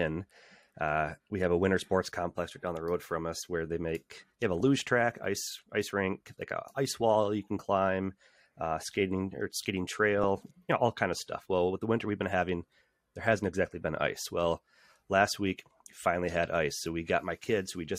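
DAB burbling at 4.60–4.64 s and 10.18–10.24 s: uncorrected bit errors briefly corrupt MP2 sub-band samples, producing short noise blips in single sub-bands over the speech.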